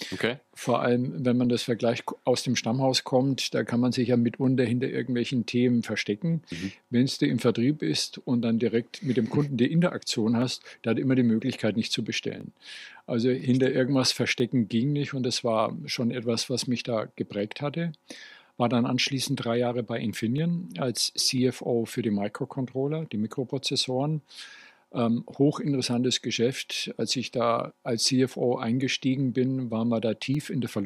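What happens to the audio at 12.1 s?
At 12.1 s the audio sits inside a run of clock drift buffer slips lasting from 0.45 s to 30.35 s: a click recurs about every 1.0 s, roughly thirty in all. The likely cause is two clocks disagreeing by around 400 ppm, so a buffer periodically drops or repeats a short block of roughly 15 samples. A spectrogram shows evenly spaced thin vertical broadband lines, and a waveform shows step discontinuities at each slip.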